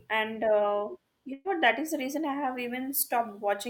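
From 1.33 to 1.48 s there is a burst of packet loss. A run of packets never arrived, so the receiver stretched the last sound into a held, fading sound for 114 ms, then 10 ms of silence. Unlike a plain dropout, the gap is filled, and 120 ms of speech is skipped.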